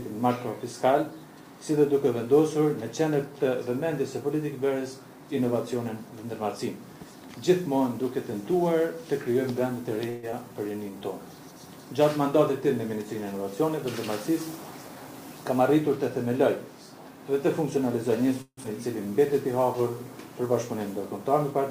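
At 10.09 s the audio stalls for about 134 ms, the last sound stretched into a short fading buzz before playback resumes exactly where it left off with nothing lost. This is a call audio freeze, likely from packets arriving late and the jitter buffer running dry, so a gap was inserted rather than anything removed.

Moments later, at 10.31 s, the sound jumps forward. Roughly 70 ms is skipped, and the two sides are butted together with only a tiny fill. This skip ahead drops a stretch of audio that was already queued, taking back about 70 ms of the delay the freeze had just added.

From 10.49 to 10.92 s the audio drags at about 85% speed with unchanged pitch, and sounds are drawn out. In this jitter buffer slow-down the receiver repeated pitch periods to add 72 ms and rebuild its reserve.

Between 14.29 and 15.61 s the opposite happens. The sound runs hurried at about 108% speed, pitch intact. 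This is a jitter buffer speed-up, with roughly 100 ms of short pitch-period pieces trimmed out to shrink an overfull buffer.

At 18.42 s comes a long network dropout lasting until 18.66 s. The last sound continues as a fading buzz for 226 ms, including about 60 ms of silence at the end. When audio returns, 120 ms of it is simply gone. The likely cause is audio failing to arrive for that stretch.

From 18.73 to 19.92 s a second jitter buffer slow-down follows, milder at about 93% speed. It draws the sound out slightly at the same pitch as 90 ms of repeated material rebuilds the buffer after the dropout.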